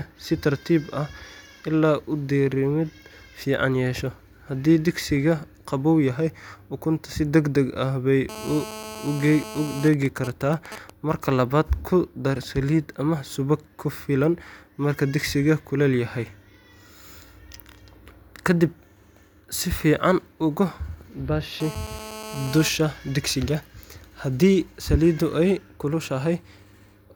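A speech recording with GSM phone buzz from 8.29 to 9.88 s and 21.60 to 22.69 s: a raspy 217 Hz buzz, about 14 dB below the speech, from a nearby 2G phone in a call. GSM signalling bursts follow from 9.94 to 10.9 s, even ticks with a longer 217 Hz buzz twice a second, roughly 15 dB down, from a nearby 2G phone in a call while its user was silent.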